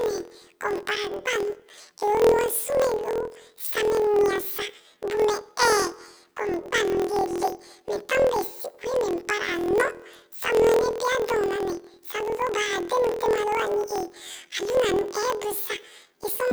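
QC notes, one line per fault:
Throughout: planar audio read as interleaved. Each 24 ms block plays twice at double speed, raising the speech an octave and adding a 41.7 Hz buzz.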